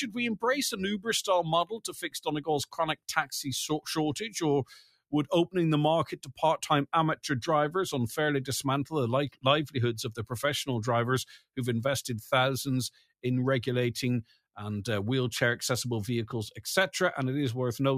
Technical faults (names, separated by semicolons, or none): noise suppressor applied to music or sounds; sound cut by the noise suppressor